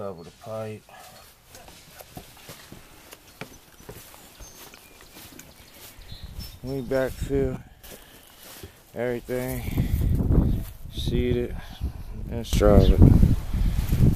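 Sudden gain jumps occur twice. At 7.57 s the level drops by about 12 dB in one step and stays down until 7.84 s, then returns. At 12.53 s it rises by about 13 dB and holds to the end of the clip. In both places the sound and its background noise shift together, with no fade. This is likely a digital gain setting applied from one sample to the next without a ramp.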